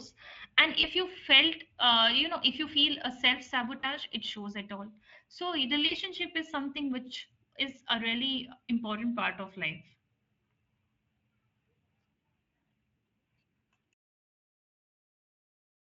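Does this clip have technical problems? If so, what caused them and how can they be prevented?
Yes. Brief stretched, fading sounds at 0.81–0.88 s (before "you felt uh you"), 3.79–3.85 s (between "a self" and "it shows at all") and 5.87–5.94 s (before "is something which is") are VoIP packet loss concealed by the speech codec, here the Speex codec. The decoder extrapolated over gaps of about 20 ms, then 40 ms twice. Using a jitter buffer, forward error correction or redundancy, and a more stable network path would prevent these dropouts.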